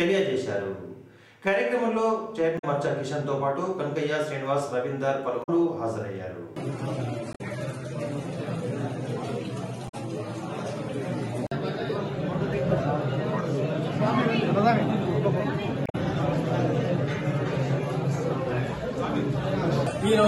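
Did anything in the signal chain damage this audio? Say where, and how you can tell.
Yes. The damage is damaged data in a compressed stream, at the codec and decode stage. Five brief events of about 0.1 s each occur at 2.55–2.64, 5.40–5.49, 7.30–7.41, 9.85–9.94 and 15.83–15.95 s. Corrupt bytes made the decoder misread frames, lose sync and hunt for the next valid header. On a spectrogram each event appears as a short vertical break in the surrounding pattern. The waveform shows an abrupt discontinuity there.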